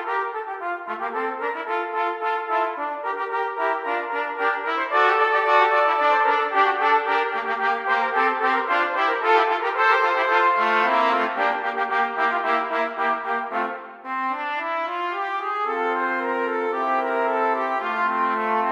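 Nothing in the recording stood out as a problem on listening.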